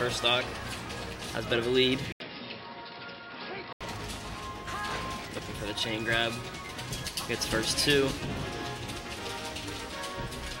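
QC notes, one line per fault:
2.12–3.81 s, input switched to a poorer device: after an 80 ms silence the sound turns dull and boxy, with nothing above 5.4 kHz, about 5 dB quieter and a faint new noise floor, likely a narrower-band input, then clears again.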